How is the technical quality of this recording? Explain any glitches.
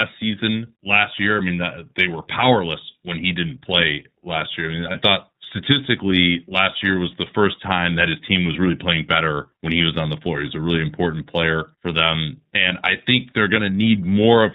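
The recording is narrowband and slightly rough throughout, with one brief glitch.

The whole clip is dull and a little synthetic, with nothing above 4 kHz and plainly audible coding damage. This is the iLBC codec, which codes each frame independently, and the sound fits its 13.33 kbps mode with 30 ms frames.

From 4.91 to 4.96 s, the speech briefly turns into a held, faintly buzzy vowel before recovering at once. These are lost iLBC frames. The decoder filled a gap of about 30 ms, consistent with a single missing frame, by repeating the last pitch cycle mixed with noise.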